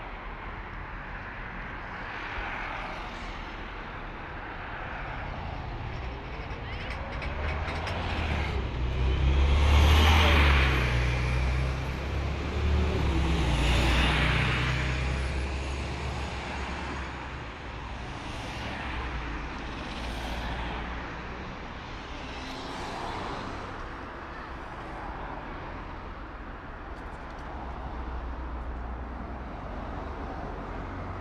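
The signal shows no technical faults at any point.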